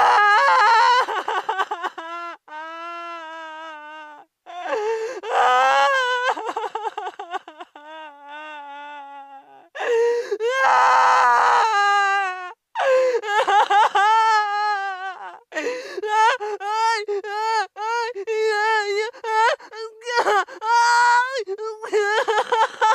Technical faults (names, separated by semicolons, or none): none